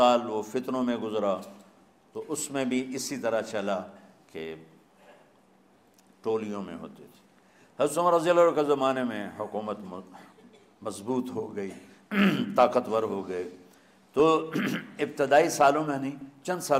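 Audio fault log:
2.83–2.93 s, 8.98–9.10 s, 14.20 s, 16.21–16.25 s: DAB burbling. Short noisy blips, each sounding like a handful of corrupted frames. Weak reception let a small fraction of bit errors slip past error correction, so wrong samples put short blips of noise in individual sub-bands.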